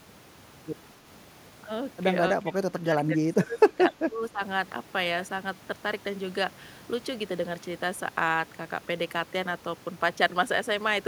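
From 2.35 to 4.41 s the speech dips by roughly 20 dB. This is likely speech suppressed in double talk, with the echo canceller turning down its own talker along with the loudspeaker echo. The waveform envelope sags.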